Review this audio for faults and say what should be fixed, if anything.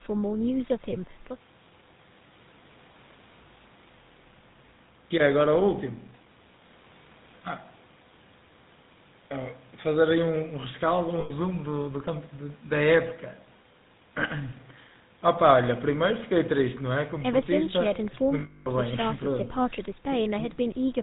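Buzzy, gravelly roughness runs through the whole speech clip, with nothing above 4 kHz. This is the GSM full-rate codec's pulse-excited vocal-tract model, consistent with 13 kbps. To prevent it, capture or route the call over a wideband codec such as AMR-WB or Opus.

At 11.2 to 11.31 s and 18.4 to 18.67 s the sound freezes into a rough metallic ring. These are lost GSM frames, covering about 100 ms and 260 ms, where the last good frame was repeated. To prevent it, reduce frame loss on the radio or network link, or add forward error correction.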